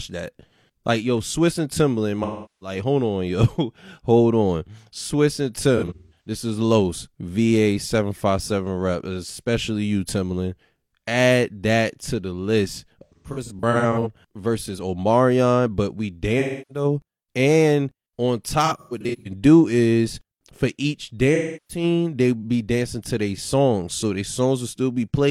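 AAC frame loss with concealment strikes the speech six times: 2.23–2.76 s, 5.77–6.31 s, 13.04–14.07 s, 16.39–16.85 s after "but we", 18.65–19.31 s, and 21.34–21.83 s. The decoder fills missing frames from the last good spectrum. At 5.77, 13.04 and 18.65 s the losses come in scattered short bursts.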